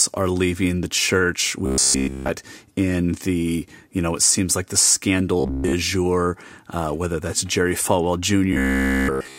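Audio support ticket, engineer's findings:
Robotic sound from repeated short buffers, speech, at 1.66–2.29 s, 5.40–5.73 s and 8.53–9.39 s. Metallic buzz fixed at 66.8 Hz (about 15 ms period) replacing all of the voice in the first and last spans and most of it in the middle one. Likely playback buffer underrun, with the last short block looped while real audio is skipped. No silence, unlike a dropout.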